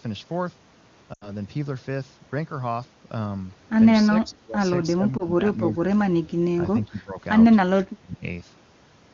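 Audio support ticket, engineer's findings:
Lost AMR speech frames, 1.13 to 1.32 s: short smeared stretch, sound holds its shape, then sags. Fits about 80 ms of frames failing their checksum, decoder reusing the last good pitch and vocal tract settings at dropping gain. Fades fast, as you'd expect on wideband.

Same fault again, 5.17 to 5.24 s: brief dip or warble. Points to one lost 20 ms frame, concealed before the next clean one arrives.

Speech suppressed in double talk, 4.09 to 4.62 s, 4.94 to 5.85 s and 6.56 to 7.17 s: near-end speech ducks by about 15 dB, in patches adding up to a few hundred ms each. Likely the echo canceller losing track while both sides talked, so it turned everything down.

Same at 8.00 to 8.23 s: deeper, about 20 dB, roughly a fifth of a second. Likely the same echo-canceller behaviour.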